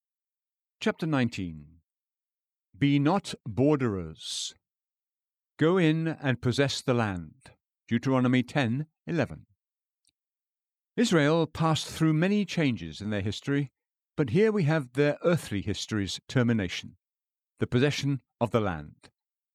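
Speech runs through the recording with no technical faults to be heard at any point.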